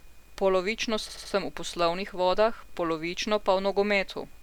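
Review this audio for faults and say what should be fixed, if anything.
From 1.09 to 1.33 s, just before "v poslovnih", the speech stutters: repeated frames replay the same 80 ms block three extra times, adding 240 ms. Unlike a dropout or concealment glitch, identical sound recurs, nothing goes missing, and the clip lengthens. Deduplicate frames by sequence number or timestamp before decoding or writing.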